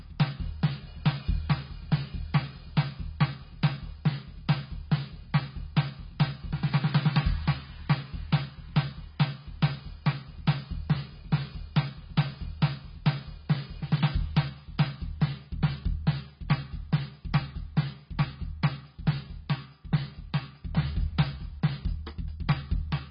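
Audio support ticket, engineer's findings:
Music dull throughout, nothing above 5.5 kHz, sustained tones warble and smear; likely heavy AAC compression near 16 kbps, not plain low-pass filtering.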